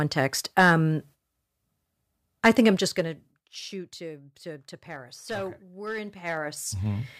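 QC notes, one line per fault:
2.65–3.47 s, zipper noise: the level drops by roughly 20 dB in unsmoothed 2 dB jumps, around fifteen a second, each leaving a click that ticks across the sound.
5.93–7.15 s, zipper noise: the level rises by roughly 20 dB in coarse 2 dB steps, about ten a second, with no smoothing, so each step adds an audible click.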